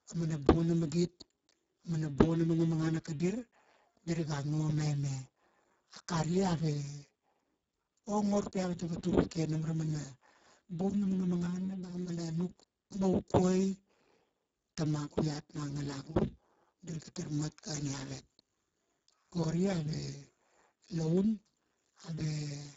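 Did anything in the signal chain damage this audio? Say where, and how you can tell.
Yes. The damage is in the codec stage, and it runs through the whole speech clip: the Speex codec at a very low setting. The speech sounds hoarse and noisy, edging toward robotic, and the coarseness points to roughly 6 kbps. Nothing sounds above about 7.6 kHz. Unlike a plain low-pass filter, Speex starves the excitation of bits, so the voicing itself turns buzzy rather than merely dull.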